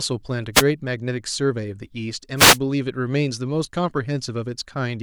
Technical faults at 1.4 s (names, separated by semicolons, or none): none